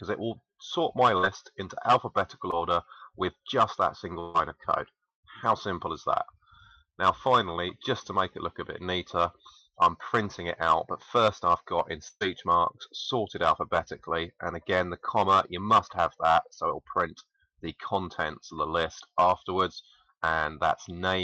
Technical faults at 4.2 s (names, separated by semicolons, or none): burst of packet loss